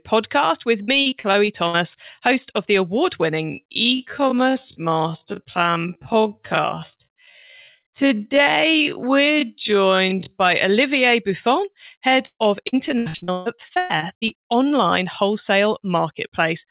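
From 0.82 to 1.76 s, just before "host of the award", the speech turns choppy and robotic. This is repeated packet loss (robotic sound). Seven holes in the stream, the longest about 59 ms, were patched by extending the preceding sound, so roughly a quarter of that stretch is synthetic filler. Unlike plain dropouts, the gaps don't fall silent. They are filled with a robotic continuation of the last sound.

From 3.40 to 10.38 s, right after "host of the award", the delivery suddenly drops to about half speed while the pitch stays where it was. The result drags. This is a time-stretched section, likely produced by software repeating short slices to lengthen the audio. Simply playing the audio slower would have lowered the pitch as well, and here it holds steady.

From 12.26 to 14.72 s, ending at "wholesale marketplace", the same packet-loss robotic sound returns more heavily. There are 23 concealed gaps, the longest about 138 ms, and they cover just over a third of the span. 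Throughout the clip, the narrowband call path leaves nothing above 4 kHz, which fits 64 kbps G.711.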